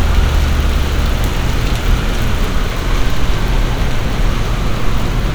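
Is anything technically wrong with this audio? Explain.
No, the recording of these sounds carries no audible technical faults anywhere in its signal.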